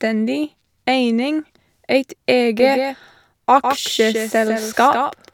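Speech, with a doubled audio track from 2.59 s to the end. An abruptly starting copy about 5 dB quieter trails by roughly 150 ms, without the decay of room echo. The likely cause is a second, slower capture path.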